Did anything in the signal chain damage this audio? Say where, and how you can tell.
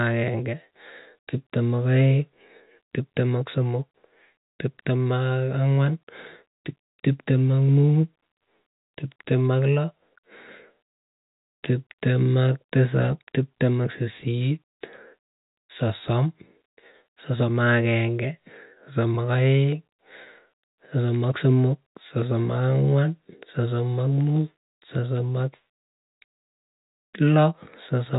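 No, nothing stood out on listening; the speech carries the narrow telephone bandwidth of G.711 coding, with nothing above about 3.8 kHz, and that is simply how the format sounds.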